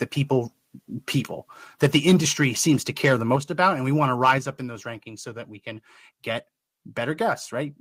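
Between 2.42 and 2.72 s and again from 3.04 to 3.36 s, the loudest syllables take on a harsh, crackling edge, consistent with microphone overload: the input likely ran about 2 to 3 dB past the converter's ceiling, flattening waveform tops. At 3.36 s, right as that second burst ends, the whole signal, background included, drops by about 6 dB in one step, which points to the call software likely stepping the microphone volume down. Overload crackle returns at 3.62 to 3.68 s and 4.23 to 4.34 s, the latter about 4 dB over and the harshest, with a larger share of peaks sheared off. Another step down of about 5 dB follows at 4.38 s, and a slight one of about 1 dB at 7.29 s.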